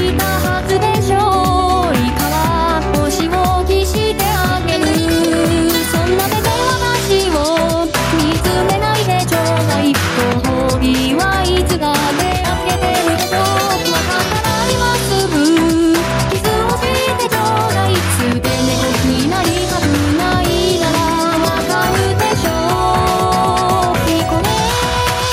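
Gain pumping runs through the whole clip: the gain swings by about 5 dB, pulled down under every loud sound. The likely cause is gain set far too high, with a fast limiter clamping down on each peak.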